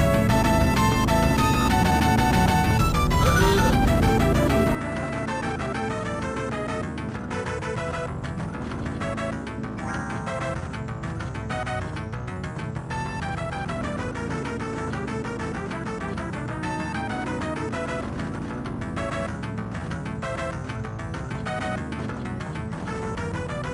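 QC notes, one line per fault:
4.75–23.74 s: input switched to a poorer device, likely. The sound drops about 10 dB with no gap at the change. Nothing is heard above 10.6 kHz afterwards, so it turns duller. A new, faint noise floor sits well below the signal.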